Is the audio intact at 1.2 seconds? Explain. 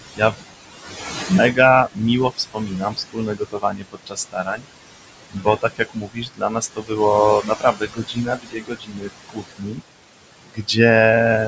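No. At 1.2 seconds the speech carries noise suppressor artifacts, and they run through the whole clip. The suppressor judges which frequency bands hold steady noise and pulls them down, frame by frame, by about 20 dB. The room noise, only about 11 dB below the speech, drops away in the gaps and swells back under the talking. The voice sits within a band that stops at 8 kHz.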